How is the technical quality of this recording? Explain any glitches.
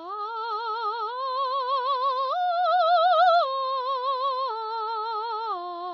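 The technical quality is poor because of one fault present from start to finish. AAC compression, throughout: the music has nothing above about 6.9 kHz and sounds dull and smeared, with a warbling, fizzy edge on sustained tones. This is likely heavy AAC-LC coding, which fits a low bitrate around 24 kbps, where the encoder drops the top band and coarsely quantises what remains.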